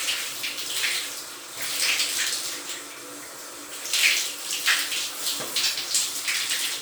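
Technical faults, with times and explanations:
Throughout, generation loss: the sound has a swirly, hollow smear, and transients blur more than a single MP3 pass at 128 kbit/s would cause, with nothing above 20.1 kHz. It likely went through about four rounds of lossy decoding and re-encoding. Each pass quantised the audio again on a shifted frame grid, so the noise and spectral gaps stacked up instead of staying in place. That's why it sounds watery and hollow.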